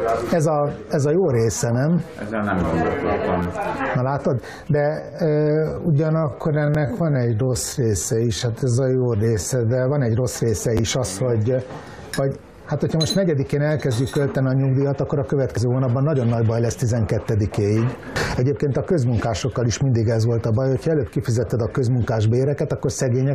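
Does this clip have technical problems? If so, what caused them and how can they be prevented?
Yes. A repeated buffer occurs four times: 3.43 to 3.46 s, 6.75 s, 10.77 to 10.80 s, and 19.37 s. Each repeat lasts 11.61 ms, which fits a 512-sample buffer, replayed one to three extra times. The result is a brief buzzy stutter with hard joins and no skipped audio, unlike a corrupt-stream glitch. Larger output buffers or higher playback-thread priority prevent it.

From 4.72 to 9.85 s the pace drops to 0.61 times normal while the pitch stays put, making the section drag. That points to a time-stretched section, likely from software fitting audio to a length. A plain slowdown would lower the pitch as well. Avoiding the stretch, or using a higher-quality stretching algorithm, prevents it.

At 15.57 s, damaged data in a compressed stream produces a short glitch as the decoder loses frame sync and searches for the next frame. 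Unlike a repeated buffer, nothing repeats. Checksummed transport and error-tolerant decoding prevent this.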